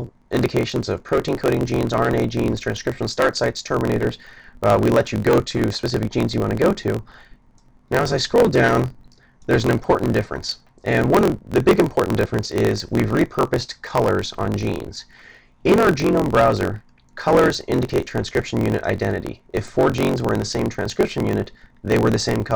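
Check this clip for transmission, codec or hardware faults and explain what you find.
There's one fault, and it runs the whole way through: a block size mismatch (truncated). One stage writes longer blocks than the next reads, so each block's tail gets dropped. You hear a 45.9 Hz buzz at the block rate, and everything plays 1.07 times fast at roughly normal pitch, which fits 1024-sample blocks being cut short.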